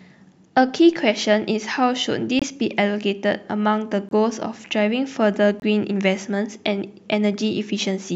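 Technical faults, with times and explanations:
2.39–2.44 s, 4.09–4.13 s and 5.60–5.63 s: corrupt frame muted. Each time the speech drops to dead silence for about 36 to 44 ms, cutting in and out abruptly. That length points to a single compressed frame being lost each time. Flipped bits left the frame undecodable, so the decoder threw it out and the player filled the slot with silence. Timing stays intact, so you get a short, hard gap rather than a skip.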